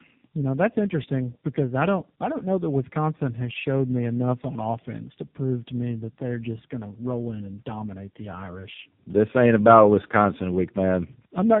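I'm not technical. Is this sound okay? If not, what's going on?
No. Tandem speech coding runs from start to finish: the speech passed through three phone-network speech coders in a row, each unpacking and re-squeezing the previous one's already damaged output. It sounds rough, warbly and muffled, with nothing above 3.7 kHz.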